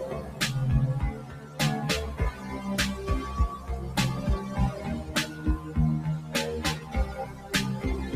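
A speech-tuned noise suppressor applied to music or sounds runs throughout, treating sustained material as noise; levels swing by around 10 dB, pumping with the signal rather than steadily like a gate. Sound is cut by the noise suppressor at 0.21–0.41, 1.11–1.59, 5.3–5.75, 6.18–6.34, 6.75–6.94 and 7.25–7.51 s, sinking about 6–7 dB, with held tones and tails dipping while onsets survive, unlike dropouts.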